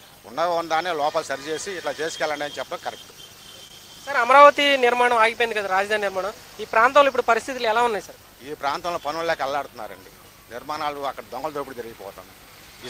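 At 3.11 s and again from 3.68 to 3.71 s, short concealed packet loss: about 10 ms of audio arrived too late to decode, and the receiver bridged each gap by extending the preceding sound before blending back, leaving a brief smear or wobble.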